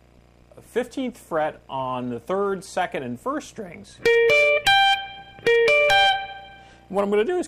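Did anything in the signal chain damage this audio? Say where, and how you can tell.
No, nothing in the signal chain damaged this audio that I can hear.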